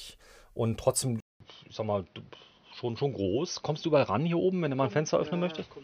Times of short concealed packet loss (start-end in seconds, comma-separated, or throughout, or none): none